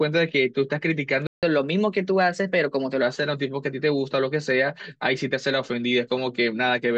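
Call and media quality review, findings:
Playback stall, 1.27 to 1.43 s: the player's buffer likely underran or its audio thread blocked, starving the output. Speech drops to silence for about 160 ms mid-flow, then resumes.

Catch-up at higher speed, 1.43 to 3.02 s: the player resampled the post-stall backlog at 1.1x to recover lost time. Speech runs faster, pitch rises roughly a semitone and a half, then both snap back to normal.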